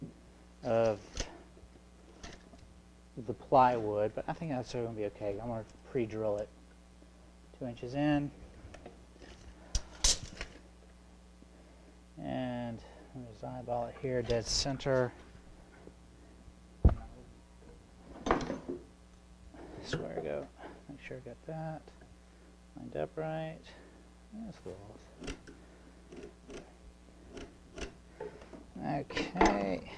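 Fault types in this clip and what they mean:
No audible faults present.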